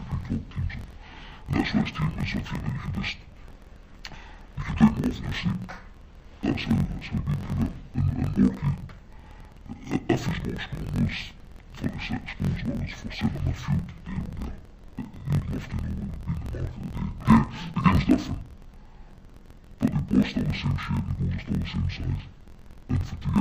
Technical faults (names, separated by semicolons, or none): interleaved audio read as planar